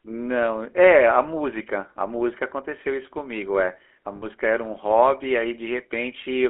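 Speech, passed throughout through the GSM full-rate codec. Its buzzy, gravelly roughness, beyond plain narrowband muffling, fits 13 kbps regular-pulse coding within a roughly 300 Hz to 3.4 kHz line band. From 4.16 to 4.25 s, lost GSM frames leave a brief metallic ring rather than a silent gap. The last good frame was repeated for about 60 ms, which fits three lost frames.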